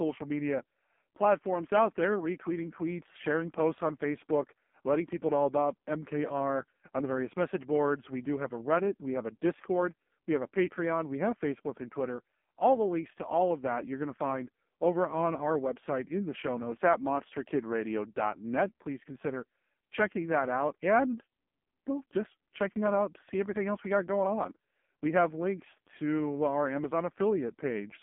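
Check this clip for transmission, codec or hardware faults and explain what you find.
One fault runs through the clip: AMR narrowband mobile codec damage. The speech is confined to 200 Hz to 3.4 kHz. Nothing passes above. The codec rebuilds the voice from a vocal-tract model and sparse pulses. The heavy buzzy, synthetic tone fits its low-rate mode, near 5.15 kbps.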